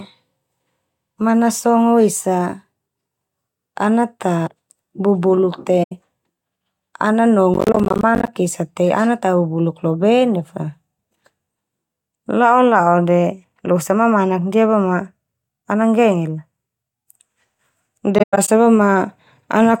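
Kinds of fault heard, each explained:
AAC frame loss with muting: lost codec frames are zeroed by the decoder, and the overlapping windows fade the speech out and back in, leaving soft-edged holes. One short dropout near 5.83 s; later, gaps scattered over about 0.3 s from 18.18 s, the longest roughly 0.1 s.
processor overload crackle: the processor repeatedly misses its buffer deadlines, and each missed buffer plays as silence with hard edges. From 7.54 to 8.28 s these tiny gaps recur, with lengths pointing to buffers of roughly 10 ms, producing a gritty crackle over the speech.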